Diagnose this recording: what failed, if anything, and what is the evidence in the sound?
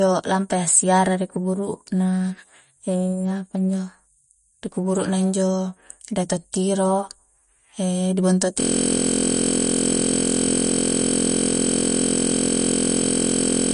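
The codec stage is the likely source of the first fault, MP3 compression. Throughout the clip the speech is plainly damaged by coding. There is nothing above 10.6 kHz, which fits an encoder's fixed treble cut. Weak frequency detail appears and disappears from frame to frame. That gives a watery, swirling texture, and the sibilants chirp. The damage points to a low bitrate, around 40 kbps. Starved of bits, the encoder discards detail it judges less important.

The second fault is a system hang loop at the driver or buffer stage. From 8.60 s to the end, one 23.22 ms slice of audio repeats exactly, over two hundred times. At that length it sounds like a steady buzz at 43.1 Hz, not a stutter. This fits a 1024-sample buffer. The driver or computer froze, and the sound hardware kept replaying the same ring buffer until the recording ended.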